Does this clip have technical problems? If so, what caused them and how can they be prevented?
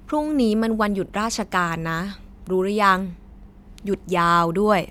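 No, this clip has no technical problems, so there is nothing to prevent.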